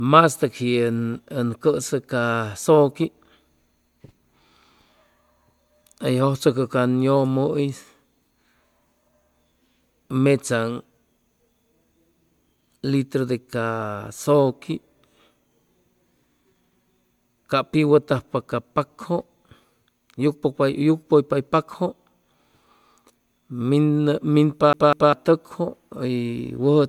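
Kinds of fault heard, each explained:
Generation loss: The speech sounds swirly, smeared and a bit hollow, with blurred consonant attacks, more than one encode would explain. That likely comes from about four MP3 passes, each re-quantising on a shifted frame grid, at what points to 128 kbit/s.
CD stuck on one turn: From 24.73 to 25.13 s, the same 199 ms slice of speech plays twice more, with a tiny mute at each jump. It's the quick, even stutter of a scratch kicking the laser back a track.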